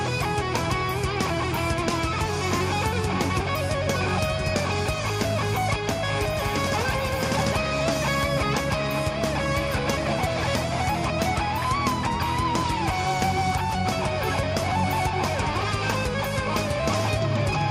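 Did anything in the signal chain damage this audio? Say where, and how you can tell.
No, nothing along the chain left a detectable mark on this audio.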